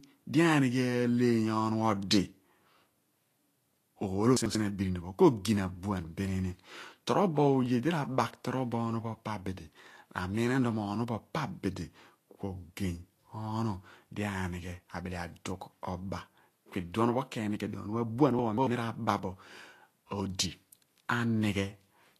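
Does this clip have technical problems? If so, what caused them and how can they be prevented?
Yes. A lossy encoder, likely Vorbis at a low setting around 36 kbps, cut everything above 14.2 kHz and quantised the remaining treble coarsely. Throughout the speech, the codec damage is plainly audible: fine high-frequency detail is replaced by grainy, noise-like energy, and consonant onsets lose their sharpness. Prevent this by encoding at a higher quality setting or keeping a lossless master.

The chunks out of order arise because a buffer of roughly 93 ms was written late and played after material that should have followed it. From 4.37 to 4.55 s, one chunk lands a single position late; from 18.39 to 18.67 s, one lands two positions late. Each spot is a jumbled moment with three hard joins, though nothing is lost. Prevent this by sequencing chunks by index or timestamp before writing them out.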